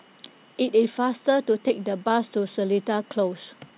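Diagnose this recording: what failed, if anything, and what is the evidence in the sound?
Network: short concealed packet loss at 1.68 to 1.72 s. The receiver extended the preceding speech across the gap, leaving a brief smear rather than a dropout's hard silence.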